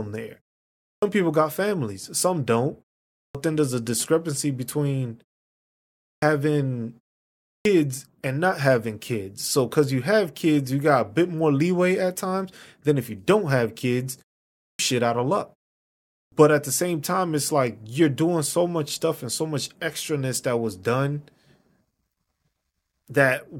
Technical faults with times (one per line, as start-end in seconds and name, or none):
0.91-1.02 clipped start after a pause
3.23-3.35 clipped start after a pause
6.11-6.22 clipped start after a pause
7.52-7.65 clipped start after a pause
14.66-14.79 clipped start after a pause
16.19-16.32 clipped start after a pause